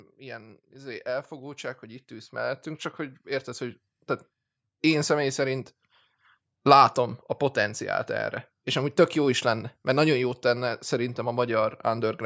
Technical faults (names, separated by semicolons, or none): automatic gain rising